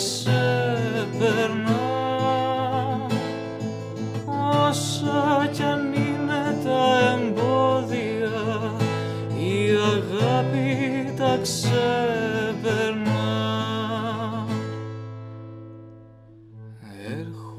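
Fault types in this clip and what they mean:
No faults are audible anywhere in the clip.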